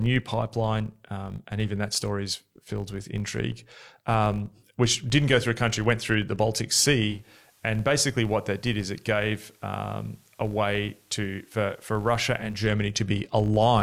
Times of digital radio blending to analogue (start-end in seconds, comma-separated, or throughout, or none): 7.00-12.73